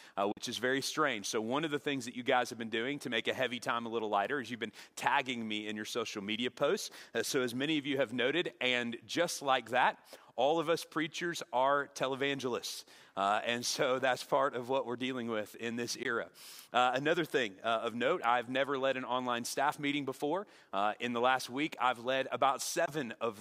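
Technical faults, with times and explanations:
0.32–0.41 s, 16.03–16.06 s and 22.86–22.90 s: Bluetooth dropout, likely. The sound cuts to silence with abrupt edges or a fade of a few milliseconds. About 46 ms of material goes missing at the first gap and about 15 ms at each later one. Late packets were dropped, and playback resumed further on, as if it had played through.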